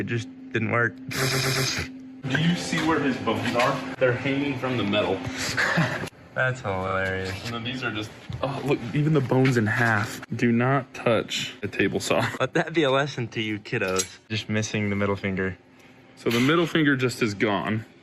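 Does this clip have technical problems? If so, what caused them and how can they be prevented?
Yes, there are repeated frames. At 1.31 s a 120 ms chunk plays three extra times, stuttering until 1.67 s, and at 6.87 s a 40 ms chunk plays twice more. Prevent it by deduplicating frames on write and retransmission.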